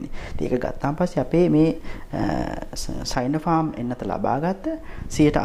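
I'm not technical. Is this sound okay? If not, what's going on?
Yes, this sound is okay. Nothing in it points to a technical problem, so there is nothing going wrong to explain.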